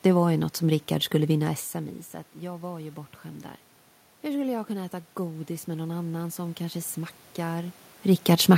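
A speech recording where, from 4.23 s to 7.83 s, you can hear automatic gain rising: the input drops by about 15 dB, so the AGC slowly cranks its gain up by about 6 dB over those 3.6 seconds, and the voice and the room noise swell together as it climbs. That shared swell marks it as gain control. The level shifts around a second and a half and seven and a half seconds in are just the talker moving relative to the mic.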